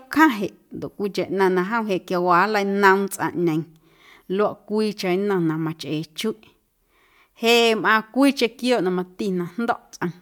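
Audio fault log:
No faults heard in the speech clip.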